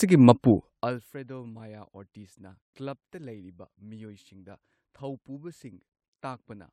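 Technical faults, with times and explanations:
No technical faults can be heard in this speech.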